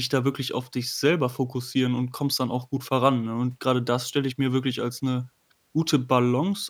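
No technical faults can be heard anywhere in this speech recording.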